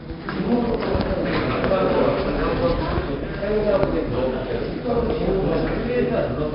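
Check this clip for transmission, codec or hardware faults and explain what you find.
One codec fault runs through the whole clip: 4-bit ADPCM compression. Each sample is coded as a coarse 4-bit step from a predicted value, with a step size that adapts as it goes. The error becomes gritty hiss that rides on every loud passage and rises and falls with the level. Sharp attacks distort where the step cannot grow fast enough. The damage is heavy. Nothing reaches above 5.3 kHz, so the top end sounds dull. That fits a low sample rate and a stream of about 44 kbps.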